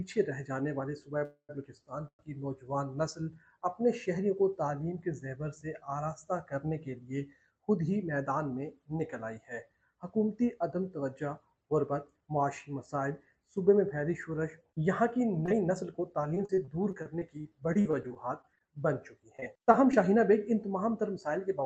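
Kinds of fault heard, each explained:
Call audio freeze: The sound stalls at 1.25 s and again at 2.08 s. The last sound is stretched into a fading buzz, then about 90 ms of silence. It resumes where it stopped. Delayed packets likely emptied the jitter buffer, adding 0.24 s and 0.11 s of delay.
Jitter buffer speed-up: From 7.52 to 8.23 s, 12.20 to 12.68 s and 15.37 to 16.40 s the sound plays about 7 to 8 percent fast at unchanged pitch. The receiver is trimming short pitch-period slices, many times in a row, to shrink a backlog.
Repeated packet loss (robotic sound): Between 15.46 and 19.95 s, more than two dozen short holes appear, none longer than 39 ms. Each is patched by repeating the previous sound, giving a choppy texture. About 0.58 s of real audio is lost across this stretch.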